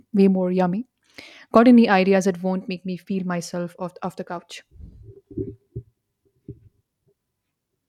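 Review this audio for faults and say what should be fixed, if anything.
Nothing needs fixing, as the speech signal shows no technical faults anywhere in the recording.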